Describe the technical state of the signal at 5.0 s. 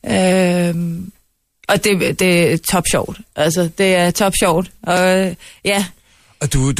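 Just before 5.0 s, at 4.97 s, right after "det er top sjovt", new audio failed to reach the output in time, so the device replayed its last buffer once, a repeated buffer. That piece lasted about 1.5 ms, which fits a 64-sample buffer, so the hard join is heard as a brief click rather than a stutter.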